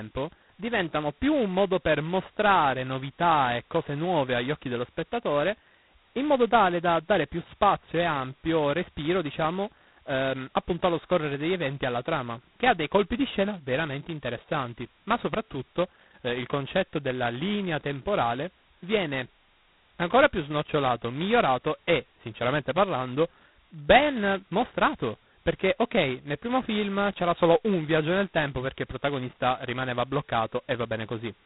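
Throughout the clip, the speech has been coded with G.726 ADPCM at a very coarse setting. Each sample is sent as only a few bits of difference from a running prediction, and the harsh, grainy damage points to the 16 kbit/s two-bit mode. Too few steps leave large quantisation errors, heard as a rasping hiss that rises and falls with the speech level. Nothing above 3.9 kHz survives, so the sound is narrow and telephone-like.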